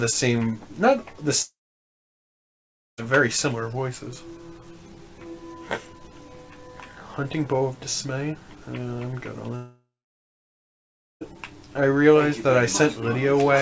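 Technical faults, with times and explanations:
1.42–3.00 s, long network dropout: likely a break in packet arrival lasting about 1.56 s. The receiver stretches the last sound into a brief fading buzz, then holds near-silence for about 1.44 s, and the audio resumes at 3.00 s without the missing portion.
9.56–11.23 s, long network dropout: packets likely stop again, this time for about 1.66 s. The concealment smears the final fragment into a short decaying tone before roughly 1.32 s of silence, and playback picks up at 11.23 s with that stretch lost.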